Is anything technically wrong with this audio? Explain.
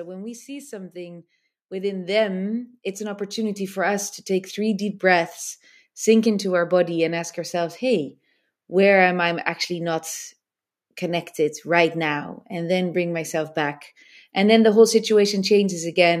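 Yes. From 0.46 s to 5.07 s there is automatic gain rising: the automatic gain control judged the input too quiet and raised its gain step by step, about 15 dB in all over roughly four and a half seconds. The speech grows steadily louder, and the background noise swells right along with it. That shared rise is the tell: a talker moving closer would get louder without lifting the room noise to match.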